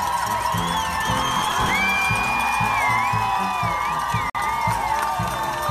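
From 1.18 to 1.71 s the audio breaks into a gritty, tearing crackle. This is processor overload crackle. The system misses its deadline for buffer after buffer, so it keeps replaying stale audio instead of fresh samples. Each replayed piece has hard edges that click against the sound around it. The grain of the crackle suggests buffers of around 10 ms, with about twenty missed. The crackle stops once the load eases. At 4.30 s the sound drops out completely for about 50 ms and resumes at 4.35 s. This is a gap between stream segments. The time stamps at a segment boundary leave a small hole, and the player fills it with silence, which gives the dropout its abrupt edges. No audio is lost, so the sound after the gap is simply delayed. The boundary's position fits 2-second segments.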